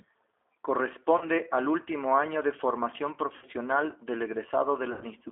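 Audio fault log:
Throughout: G.729 codec at 8 kbit/s, speech rebuilt from filter, pitch and sparse pulses, band about 300 Hz to 3.6 kHz, so plainly rough and synthetic.
1.18 to 1.26 s, 3.36 to 3.47 s, 4.92 to 5.04 s: VoIP packet loss concealed by the speech codec, about 30, 60 and 90 ms missing, decoder stretches previous pitch into fading buzz or noise, then recovers weakly.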